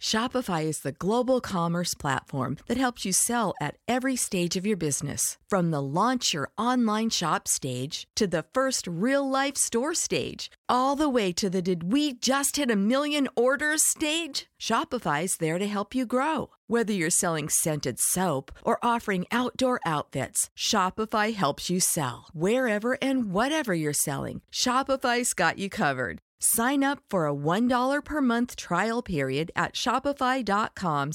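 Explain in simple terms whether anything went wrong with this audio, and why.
Nothing went wrong here: the recording is steady throughout, with no dropouts, glitches or other faults to point to.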